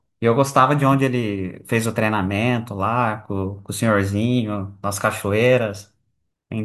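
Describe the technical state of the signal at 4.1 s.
At 4.1 s the signal is intact, with no audible technical fault at that moment.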